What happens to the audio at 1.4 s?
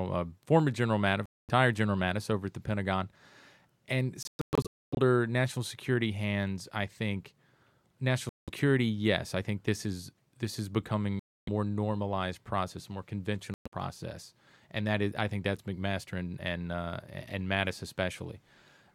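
The sound cuts out completely from 1.26 s to 1.50 s, a gap of about 0.23 s, then picks up mid-stream as though it had kept playing. This is a Bluetooth dropout, likely caused by audio packets arriving at the headphones too late and being discarded. Unlike a buffer underrun stutter, nothing repeats or freezes; unlike an edit, the timeline keeps running through the silence.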